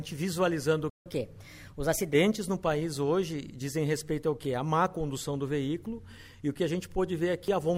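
The audio cuts to silence at 0.89 s and resumes at 1.06 s, a gap of about 160 ms, most likely a playback stall where the player ran short of buffered data or its output thread was blocked. From 1.06 s to 2.13 s the sound runs at 1.15 times normal speed with pitch raised by roughly two semitones. This catch-up at higher speed resamples the backlog to recover the lost time, then drops back to normal rate and pitch.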